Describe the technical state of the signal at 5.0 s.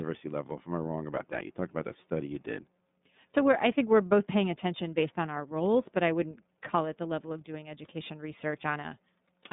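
At 5.0 s, as throughout, the iLBC codec caps the spectrogram near 3.8 kHz; its independently coded 30 ms frames make the speech plainly rough and synthetic.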